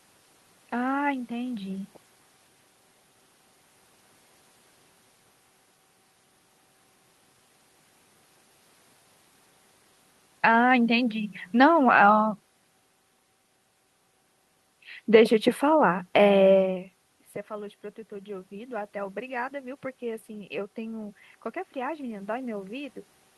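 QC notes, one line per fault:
17.50–21.27 s, automatic gain rising: after the input level fell by about 15 dB, around the point where the talker moves away from the microphone at roughly 16.5 s, the automatic gain control judged the signal too quiet and raised its gain by about 5 dB over nearly four seconds. Because the whole input is amplified, the voice and the room noise swell together, a slow lift in level rather than a sudden jump.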